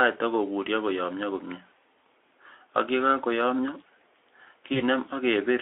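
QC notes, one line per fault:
4.73–4.82 s, VoIP packet loss concealed by the speech codec: one 20 ms frame drops, so the decoder stretches the last sound into a brief fading buzzy tone or coloured noise before it recovers.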